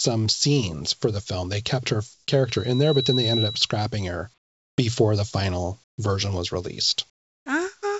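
The sender's voice detector likely judged the pauses silent and stopped transmitting, so the receiver filled them with comfort noise in place of the background. At 2.14–2.28 s, 4.38–4.78 s, 5.84–5.98 s and 7.10–7.46 s, the real room sound gives way to a flat, featureless hiss. It drops by about 2, 6, 16 and 19 dB respectively, so the last two gaps sound like the background suddenly thinning out.

At 5.96 s, the detector was likely slow to register that speech had resumed, so the onset clipped by the voice detector lost its first 20 ms to comfort noise. The sound then begins abruptly, without its soft start. Throughout, nothing is heard above 8 kHz, which points to a wideband call codec.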